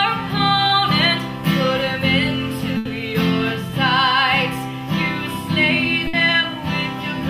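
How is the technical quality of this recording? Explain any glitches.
The recording has three transmission dropouts where audio was lost in transit and patched over by the receiver: one short concealed packet loss and two longer bursts.

At 0.67 to 0.71 s there is a short concealed packet loss. About 20 ms never reached the decoder in time, so the receiver extended the preceding sound and then blended back into the real signal. It is heard as a brief smear or wobble. On a spectrogram it shows as a thin vertical strip where the harmonics or noise texture repeat the previous frame. In the waveform a few cycles look copied rather than continuing naturally.

At 2.77 to 2.87 s and again at 6.07 to 6.15 s, a burst of packet loss removed roughly 80 ms and then 60 ms of audio. The receiver kept the last sound going and faded it down, producing a held buzz or fading hiss before the audio resumes with the intervening portion missing. 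A spectrogram shows frozen, flat bands that dim toward the end of each gap. The waveform shows a repetitive, decaying envelope followed by an abrupt jump where the signal picks up again.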